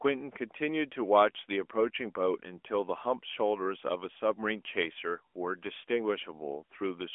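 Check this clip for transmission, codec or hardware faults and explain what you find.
No transmission, codec or hardware faults turn up in this speech clip, which sits within a narrow telephone-style band with nothing above about 3.6 kHz, as expected for the channel it was carried over.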